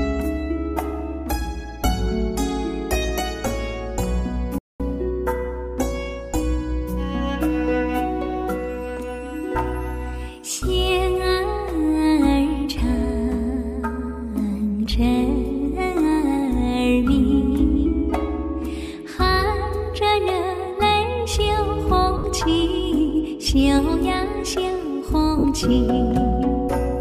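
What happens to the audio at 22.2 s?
At 22.18 to 22.24 s the sound briefly turns into a noisy, smeared wash and sinks in level rather than cutting cleanly. These are lost LE Audio frames: about 60 ms went missing, which fits six 10 ms frames, and the LC3 decoder refilled the gap by repeating the last spectrum with random signs, fading it as the loss continued.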